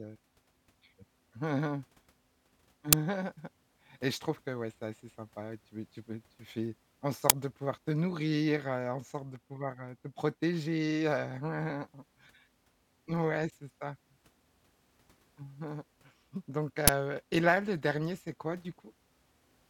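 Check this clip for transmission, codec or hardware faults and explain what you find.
There's an uninitialised buffer fault, three times, at 2.93, 7.30 and 16.88 s. Each time a block got played before any audio landed in it, so leftover memory came out as a short, loud crack over the speech. The first two fit a 256-sample buffer, and the last, about 12 ms long, fits a 512-sample one.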